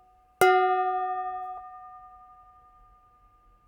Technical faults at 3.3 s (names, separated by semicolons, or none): none